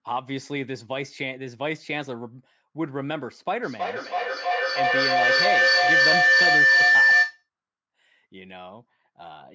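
Speech on a call, and from 3.62 to 7.49 s a feedback howl takes over: two devices in one room are looping mic to speaker, each pass louder, narrowing to a tone around 2 kHz with repeats roughly every 300 ms, and peaks about 11 dB above the speech.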